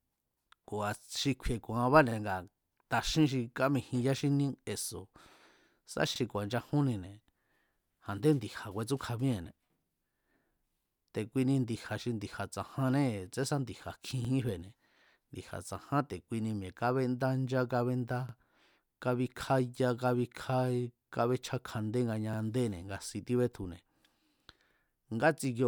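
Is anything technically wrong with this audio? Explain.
Yes. Overlapping chunks cause a 44 ms repeated stutter every 4.0 s in this speech, at 2.11 (after "xi kju̱i̱"), 6.16, 10.20, 14.25, 18.29 (after "mi̱e̱ kábendá ncha kábéndá") and 22.33 s (before "nga si"). Each chunk restarts early, replaying audio rather than dropping it as a gap would.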